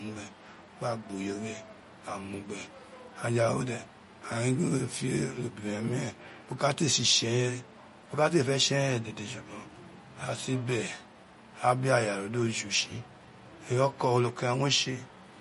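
From start to finish the speech carries plainly audible compression damage, most likely from MP3 encoding at a low rate, which fits a bitrate of around 40 kbps. Nothing remains above 11.1 kHz, and the s sounds turn watery and swirl as weak frequency lines drop in and out between frames, with attacks smeared. A simple low-pass filter would dull the top end just as cleanly, but it would not produce this shifting, chirpy texture.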